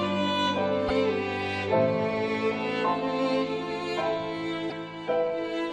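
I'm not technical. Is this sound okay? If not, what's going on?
No. At 0.88 s and again at 4.69 s there's a tiny glitch of about 30 ms where the sound skips ahead. This is likely a broken MP3 bit reservoir: part of the file went missing, and the next piece borrowed leftover data from the wrong place. Unlike a simple dropout, the sound jumps forward rather than just pausing.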